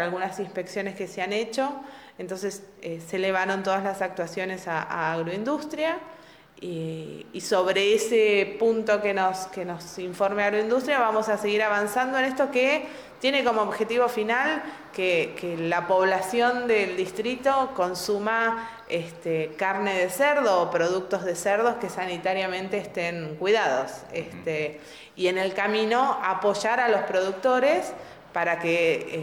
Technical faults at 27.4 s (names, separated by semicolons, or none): none